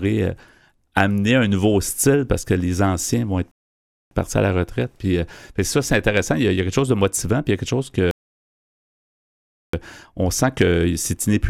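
The speech in this clip twice stops dead and then picks up again. Both pauses are rebuffering stalls. The player ran out of downloaded audio and waited for more. The first silence runs from 3.51 to 4.11 s, between "les anciens vont être" and "partis à la retraite", adding 0.6 s. The second runs from 8.11 to 9.74 s, adding 1.6 s. Each time the speech resumes exactly where it stopped. Nothing is missing, but the pauses stretch the clip.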